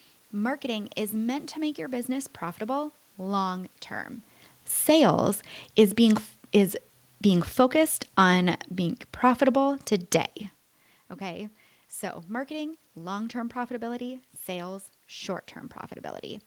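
From 5.99 s to 9.81 s, right after "sales is", the automatic gain control judged the input too loud or its background noise too strong and eased its gain down by about 4 dB. This automatic gain falling makes the speech sink steadily, with the room noise sinking alongside it.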